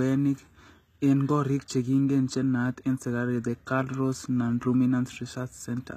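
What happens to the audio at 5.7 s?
At 5.7 s the speech sounds gritty and metallic in the treble, with sibilants turning lispy and nothing above about 14.9 kHz. This runs through the whole clip and is likely HE-AAC compression at a low bitrate around 20 kbps, where the upper band is rebuilt from copied lower bands whose harmonics don't align.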